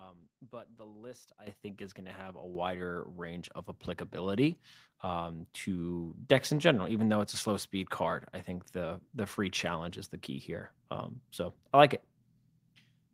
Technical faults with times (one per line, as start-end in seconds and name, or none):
1.47 microphone volume stepped up
2.55 microphone volume stepped up